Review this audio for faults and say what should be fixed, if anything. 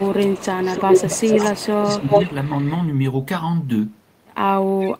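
Speech suppressed in double talk occurs from 0.0 to 2.3 s. The speech dips by up to about 20 dB, across roughly one and a half seconds in total. A shorter dip of about 5 dB follows at 4.85 to 4.89 s. Both sides were likely talking at once, and the echo canceller turned down its own talker along with the echo. Better double-talk detection would keep the near talker at full level.

Echo leak runs from 0.07 to 2.75 s. A copy of the speech returns 286 ms late, at roughly the same level as the original. A fainter copy, about 20 dB down, follows at 4.63 to 4.94 s with a 306 ms delay. A loudspeaker echo likely got past the canceller. Stronger echo cancellation or a headset would stop the returning copy.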